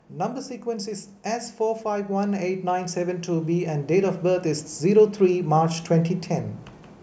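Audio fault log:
0.1–6.57 s, automatic gain rising: the automatic gain control judged the input too quiet and kept raising its gain, lifting the level by about 11 dB over roughly six and a half seconds. The speech and the background noise swell together at the same slow rate, which separates this from a speaker moving closer or talking louder, where the voice would grow while the room noise stayed put.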